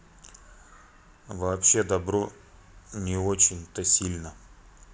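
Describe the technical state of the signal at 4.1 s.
At 4.1 s the signal is intact, with no dropout, clipping, distortion or other fault at that moment.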